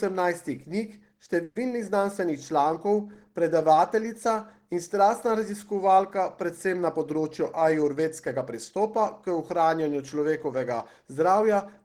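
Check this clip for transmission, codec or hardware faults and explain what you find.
Two transmission faults turn up in this speech clip.

A call audio freeze at 1.43 to 1.56 s most likely comes from late packets draining the jitter buffer. For about 120 ms the receiver stretches the last sound into a fading buzz or hiss, then resumes where it stopped, so nothing is lost but the audio now runs 120 ms later.

A jitter buffer speed-up runs from 6.77 to 8.54 s. With too much audio queued, the receiver trims short pitch-period slices over and over, removing roughly a tenth of a second. The speech plays about 6% faster at unchanged pitch and sounds slightly hurried.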